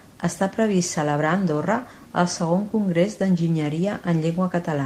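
No technical faults can be heard anywhere in the recording.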